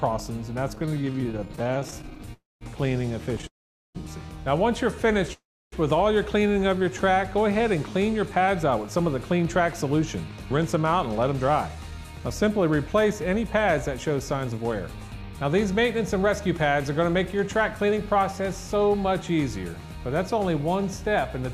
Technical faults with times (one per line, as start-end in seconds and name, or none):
0.75-2.30 repeated stalls (stutter)
2.34-2.63 call audio freeze
3.47-3.97 call audio freeze
5.33-5.74 call audio freeze
6.47-6.91 jitter buffer slow-down
8.09-19.27 jitter buffer speed-up